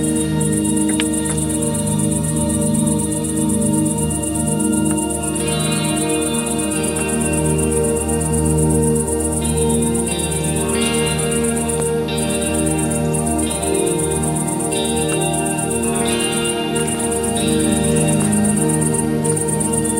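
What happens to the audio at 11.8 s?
At 11.80 s a single loud pop lands on the audio, lasting about 20 ms until 11.82 s and peaking roughly 10 dB above the surrounding sound. It is heard as one sharp click-thump laid on top, while the underlying audio continues uninterrupted beneath it. The likely cause is a brief voltage step or spike entering the signal chain, such as a connector being disturbed, a switch transient, a static discharge or a driver glitch, which the downstream circuitry then shapes into that short, hard pulse.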